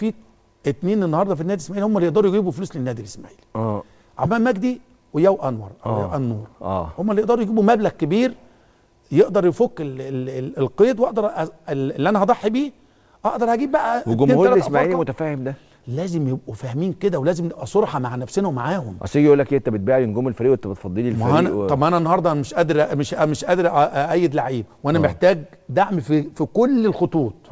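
At 4.24 s there is a skip ahead. About a fifth of a second of sound never plays. It was dropped while later audio was already waiting. Playback jumps forward with no gap, and the two sides join almost directly.

From 4.81 s to 5.47 s comes a jitter buffer speed-up. Too much audio had built up. The receiver trimmed tiny pitch-period slices, roughly 50 ms in total. The sound runs at 107 percent speed, hurried but at the same pitch. Through the G.722 call path, nothing above 8 kHz is heard.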